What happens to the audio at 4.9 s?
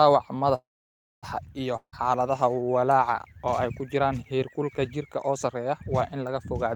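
Nothing goes wrong at 4.9 s; the speech runs through that moment intact, with no dropout, click or distortion.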